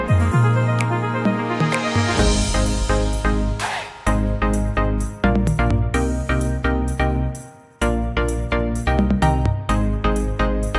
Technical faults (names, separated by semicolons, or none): none